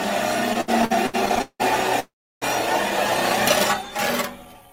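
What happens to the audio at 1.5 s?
At 1.5 s the sound is in repeated stalls (stutter), running from 0.53 to 1.62 s: ten late-packet gaps, the longest about 179 ms, were bridged by extending the last sound, fading in longer waits. It drags and stutters; a spectrogram shows smeared, stretched repeats.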